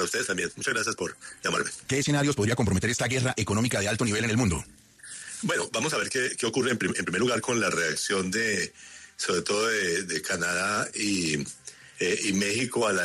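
From 0.0 to 7.42 s there's a time-stretched section: the pace runs about 1.7 times fast and rushed, yet the pitch never rises. That's likely software squeezing the audio by dropping short slices to fit a shorter length, then it abruptly settles to normal speed.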